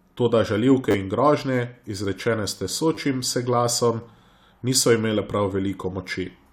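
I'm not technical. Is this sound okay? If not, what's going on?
No. The speech has two very brief stutters, around 0.91 to 0.94 s and around 2.95 to 2.97 s, each heard as a quick buzzy click. This is a repeated buffer: fresh audio didn't reach the playback device in time, so it replayed the last tiny slice, three extra times at the first spot and twice at the second. The slices sound about 10 ms long, and a few hundredths of a second of real speech are lost at each spot.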